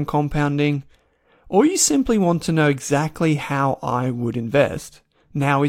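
Nothing here sounds like a technical fault; the speech just runs its course without any dropouts, glitches or other trouble catching the ear.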